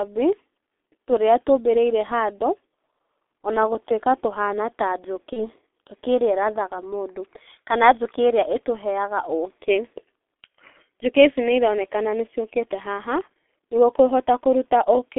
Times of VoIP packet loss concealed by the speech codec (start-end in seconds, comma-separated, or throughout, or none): 5.33-5.46